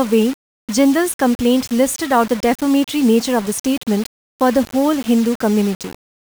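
Low bit depth without dither runs through the whole speech clip. A harsh grain rides on every syllable, and quiet gaps drop to silence or sputter. The likely cause is rounding to very few levels, consistent with 5 bits, leaving error roughly 20 dB below the signal.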